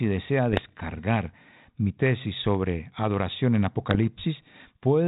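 Speech carried over a G.726 ADPCM path, band-limited to 4 kHz with light coding hiss consistent with 32 kbit/s, shows bit errors on an ADPCM link from 0.52 to 0.90 s and from 3.81 to 3.99 s. Each flipped bit corrupts the decoder's adaptive step size and predictor, so errors at a rate of a few tenths of a percent are heard as pops and rough, gritty bursts with brief jumps in level that ring on for some milliseconds.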